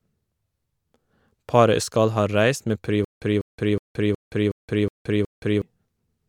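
From 3.05 to 5.62 s, a stutter with silent gaps: a 196 ms burst repeats seven times, each followed by 172 ms of digital silence, likely a stalled stream retrying. The true silence between bursts sets it apart from a seamless loop.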